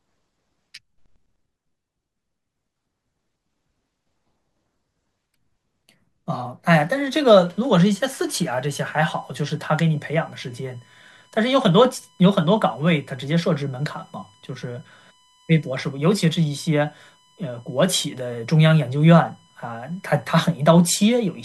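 From 7.33 s to the end, a USB whine sits under the speech: a fixed-pitch tone on a 1 kHz series, loudest at its 3 kHz harmonic, roughly 35 dB below the speech. Bus current drawn in 1 ms frames leaks through power or ground. A spectrogram shows steady horizontal lines spaced 1 kHz apart.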